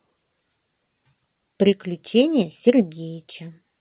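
Speech over a call path whose narrowband sound, with nothing above 4 kHz, fits G.711 mu-law at 64 kbps; no technical faults found.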